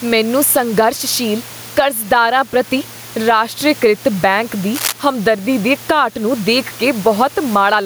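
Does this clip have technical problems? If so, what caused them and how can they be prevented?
Yes. Gain pumping runs through the whole recording. The level is pulled down on loud sounds, a gain swing of around 10 dB. The likely cause is gain set far too high, with a fast limiter pulling it down on each loud syllable. Lower the input gain so the limiter rarely engages.

Cable scratch noise appears from 4.73 to 4.93 s. It is a dense, ragged burst of rustling, only a little quieter than the speech. A worn cable, connector or control was likely moved, so its contact resistance jumped about. Replace or clean the faulty lead and keep connections still while recording.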